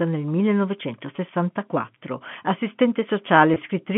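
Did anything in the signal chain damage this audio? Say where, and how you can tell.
Yes. The damage happened on the network, as packet loss with pitch repetition at 1.16 to 1.18 s and 3.54 to 3.56 s. Each gap lasts 20 ms, which fits a single lost packet. At both points the speech briefly holds a slightly buzzy, sustained tone instead of dropping out. That happens because the receiver loops the last pitch period to fill the hole. A plain dropout or buffer underrun would leave silence or a click. The G.711 line band of 150 to 3400 Hz is unaffected.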